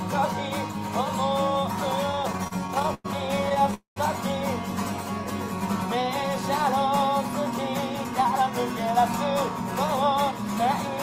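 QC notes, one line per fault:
2.07–3.06 s and 3.44–3.74 s, repeated stalls (stutter): late packets left the jitter buffer empty 15 and then 6 times, with gaps up to 102 ms, so the receiver stretched the last sound over 272 ms and 60 ms. The sound drags and stutters, but nothing is lost.
3.74–3.98 s, call audio freeze: the sound hangs as a fading continuation for 220 ms, ending in about 130 ms of silence, then resumes where it stopped. The cause is likely held-up packets emptying the jitter buffer, adding 220 ms of delay.
7.95–9.03 s, jitter buffer speed-up: to cut the built-up delay, the receiver trimmed short pitch-period pieces again and again, around 50 ms in total. The sound plays at 104% speed with unchanged pitch.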